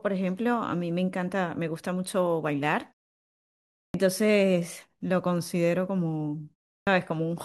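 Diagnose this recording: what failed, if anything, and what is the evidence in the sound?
Speech twice resumes abruptly out of silence with its opening sounds missing: at 3.86 s after a pause of about 1 s, about 82 ms is swallowed, and at 6.78 s after a pause of about 0.3 s, about 88 ms is lost. This is a clipped start after a pause at the playback stage. The output device idles during silence and must wake or relock before passing sound again, so each onset arrives already cut.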